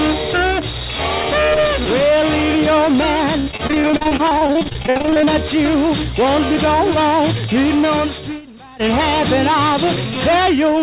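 From 3.4 to 5.29 s, repeated packet loss (robotic sound) chops the audio: about thirty short gaps, the longest 66 ms, are patched by stretching the preceding sound. Unlike a single dropout, the gaps recur in rapid succession, so the fill takes up roughly a third of that stretch.

From 7.06 to 8.88 s, a loudspeaker feedback squeal rises at 6.2 kHz. Over about one and a half seconds, the loop's gain pushes this single tone to about 5 dB above the sound. Its steady swell distinguishes it from a sudden whistle or interference.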